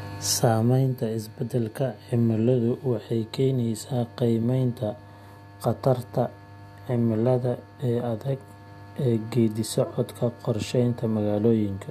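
Nothing technically wrong turns up in this speech recording, so there's no problem to place on the timeline or trace back to a cause.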